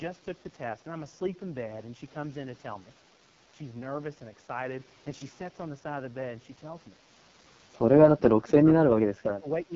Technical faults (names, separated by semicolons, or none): AMR wideband (HD Voice) codec; speech suppressed in double talk